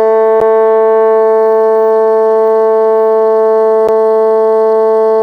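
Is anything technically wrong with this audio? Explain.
Yes. This music clip has two blocks of digital silence, at 0.40 s and 3.88 s, each about 10 ms long. At each one the sound cuts out abruptly, most likely because the output buffer was not filled in time. Being so short, each abrupt cut and return is heard as a tick or a dip rather than as silence.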